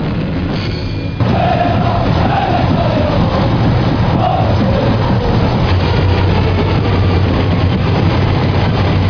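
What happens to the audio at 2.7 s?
Nothing goes wrong at 2.7 s: the audio plays through that moment intact, with no dropout, glitch or other fault.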